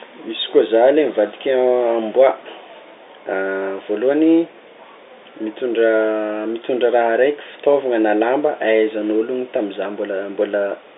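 No technical faults occur anywhere in this speech, which carries the narrow band of an ordinary telephone line throughout.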